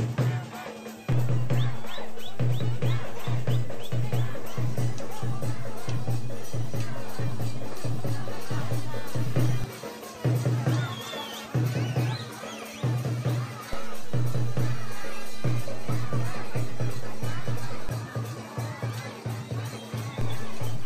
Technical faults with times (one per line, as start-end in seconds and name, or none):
1.12-9.64 DC step
13.73-17.89 DC step
20.21-20.85 DC step